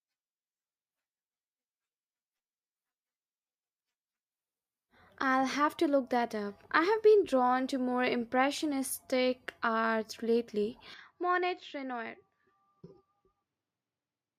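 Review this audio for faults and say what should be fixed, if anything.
At 10.94 s the speech turns duller and drops roughly 10 dB in level, with nothing above 7.6 kHz and a faint new noise floor, to the end at 14.39 s. This is likely an input switched to a poorer device. Unlike a codec bandwidth drop, tone, level and noise shift together at once, with no gap. Lock the recording input to one device so the system cannot switch microphones mid-session.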